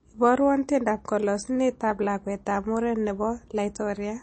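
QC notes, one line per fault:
Throughout: MP3 compression, plainly audible codec damage with nothing above 8.4 kHz, likely a bit-starved encoder cutting treble, consistent with about 32 kbps.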